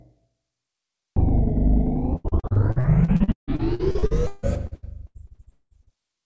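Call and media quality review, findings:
Repeated packet loss (robotic sound), 2.16–5.97 s: 26 gaps, longest 198 ms, about 38% of span concealed. Jitter buffer/PLC stretching last frames, giving choppy audio. Spectrogram: smeared horizontal streaks, vertical breaks at gap edges. Waveform: repetitive, flattened envelopes. Band stops at 8 kHz, consistent with G.722.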